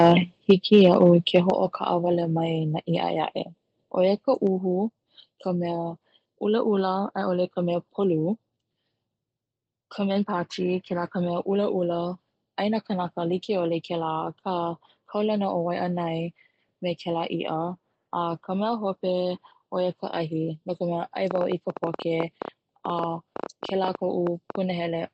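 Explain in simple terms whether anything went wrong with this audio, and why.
Microphone overload, from 0.49 to 1.1 s and again from 1.36 to 1.5 s: the loudest moments were likely too strong for the microphone's input, so their tops were sliced flat. That flattening adds a harsh, crackly edge to those peaks.

Microphone volume stepped down, at 1.5 s: right after the second distorted burst, everything suddenly gets quieter in one step, voice and background together. The call software likely reacted to the overload by turning the microphone's input down.

Train of clicks, from 21.3 to 24.6 s: roughly forty sharp ticks, about ten per second at an uneven pace, sit clearly on top of the speech and in the gaps too. They most likely come from electrical interference or a faulty connection or power supply.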